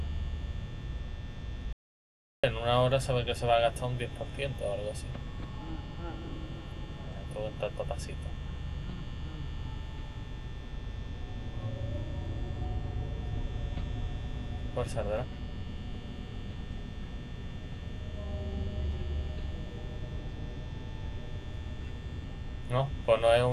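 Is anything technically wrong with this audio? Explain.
Yes. From 1.73 s to 2.44 s there is an audio dropout to silence: about 0.71 s of silence with no room tone, likely from the input briefly disconnecting while recording continued.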